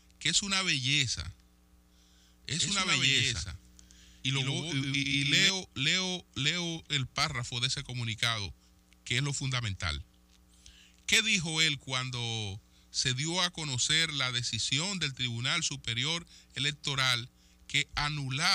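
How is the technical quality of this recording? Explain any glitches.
There's one real glitch. From 2.59 to 5.49 s you get a doubled audio track: a full-band copy trailing roughly a tenth of a second behind, about 5 dB down, with no decay or room colour. It's likely a second, slower capture path mixed in, and it cuts in and out abruptly.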